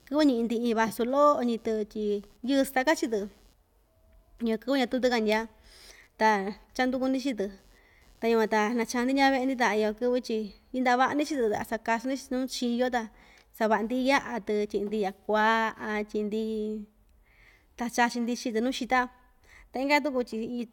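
From 0 to 11.01 s, computer activity noise buzzes under speech. It pulses near 150 Hz, about 40 dB down. Load changes disturb the ground.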